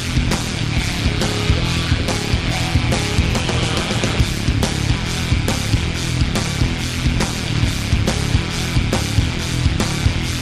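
Throughout, frames were overlap-added with windows that don't sum flat, causing overlap-add ripple: the level pulses about 11 dB near 150 Hz, a metallic buzz with extra tones around each note.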